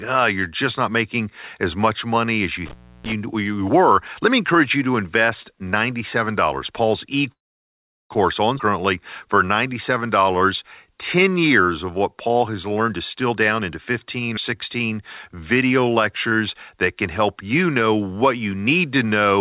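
From 2.65 to 3.12 s, just after "much money as you", an intermittent contact opens the line for about 316 ms. The speech cuts out with crackle at each edge, leaving only faint hiss until "you were let me" resumes.

From 7.32 to 8.12 s, the receiver runs out of audio to play for 781 ms. After a brief fading continuation, there is about 750 ms of silence, and then the speech carries on with nothing lost. This is likely a call audio freeze, caused by delayed packets emptying the jitter buffer.

At 8.58 to 8.61 s, a skip ahead drops roughly a third of a second of audio. The two sides are spliced almost directly, so the speech jumps forward abruptly.

From 9.26 to 12.74 s, a jitter buffer slow-down repeats pitch periods to rebuild its reserve, adding 284 ms. The speech runs at 92% speed at unchanged pitch, sounding drawn out.

From 12.79 to 13.71 s, a jitter buffer speed-up trims pitch periods, removing roughly 300 ms. 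The speech plays at 127% speed at the same pitch and sounds hurried.

At 14.37 to 14.39 s, a second skip ahead removes about a tenth of a second, causing a small forward jump.

From 14.55 to 16.30 s, another jitter buffer slow-down adds 121 ms, so the speech runs at 94% speed and stretches slightly until "that can help you".

Throughout the clip, the call path keeps the audio narrowband, with nothing above 4 kHz. This points to a 64 kbps G.711 mu-law codec.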